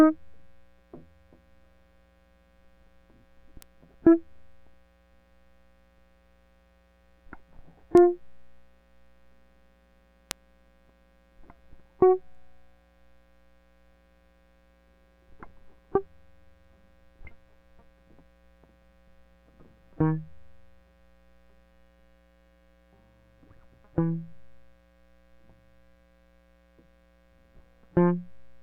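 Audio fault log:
3.62 s, 7.97 s, 10.31 s, bit error spikes: single sharp ticks, up to about -5 dBFS, from a flipped bit making one to three samples jump and snap back.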